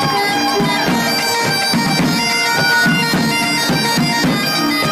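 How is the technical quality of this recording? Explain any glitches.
The recording is marred by one clear fault. A loudspeaker feedback squeal runs from 2.24 to 3.31 s. A microphone is picking up the loudspeaker it feeds, and at 1.5 kHz the loop gain exceeds one, so that frequency keeps reinforcing itself. It is heard as a single 1.5 kHz tone that swells over about half a second into a squeal, ending up roughly 5 dB louder than the surrounding sound before it stops at 3.31 s.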